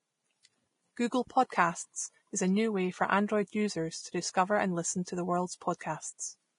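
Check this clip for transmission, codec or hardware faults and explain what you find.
Yes, there is one codec fault, and it runs through the whole speech clip. It is Vorbis compression, likely. Nothing sounds above 10.6 kHz. The treble is quantised so coarsely that fine detail turns to noise. The result is hissy, grainy speech with rough tones and smeared attacks. The heavy damage points to a low bitrate near 30 kbps.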